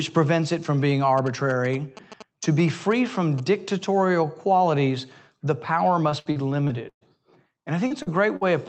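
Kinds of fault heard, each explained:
GSM signalling bursts: A 2G phone near the recording equipment was sending short groups of radio bursts, as it does while signalling to the network. The audio circuit rectified them into sound. From 1.18 to 3.40 s, just after "prevents it from being", a galloping dit-dit-dit of brief buzzes runs under the speech. The buzz sits at about 217 Hz, the burst rate. It stays well below the speech level.
Repeated packet loss (robotic sound): Packets were lost or arrived late again and again over one stretch. Each time, the receiver patched the hole by extending the last sound. From 6.09 to 7.03 s, just after "dictatorial qualities the power", five gaps follow each other closely. About 260 ms of speech is missing, and the longest gap is 118 ms. Concealment fills 28 percent of the span, so the speech turns choppy and robotic.
Short concealed packet loss: A few hundredths of a second of audio failed to reach the decoder in time. 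The receiver filled each hole by continuing the preceding sound, then blended back into the real signal. This happens twice, at 7.87 s and at 8.02 s. Each event loses 40 ms of speech. Each is heard as a brief smear or wobble, and a short consonant can vanish inside it.
Burst of packet loss: A run of packets went missing in one block. The receiver extended the last sound and faded it as the gap continued. At 8.36 to 8.43 s, 40 ms of speech is lost and 49 ms is filled. A voiced sound turns into a short held buzz, and other sounds become a fading hiss. The speech then resumes slightly further on, and the piece in between is gone. All of this sits on the Opus call path's roughly 8 kHz band limit.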